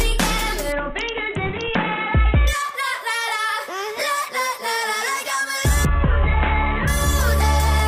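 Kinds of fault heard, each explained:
Bluetooth SBC bit pool drop: The Bluetooth link got congested, so the encoder spent far fewer bits on each frame. The top sub-bands lost their share, and the rest were quantised coarsely. Twice, from 0.72 to 2.47 s and from 5.85 to 6.88 s, the treble goes dull and a gritty noise rises. Each time the sound recovers its brightness when the rate climbs back. The damage fits a bit pool cut from 28 to 5, near 54 kbps.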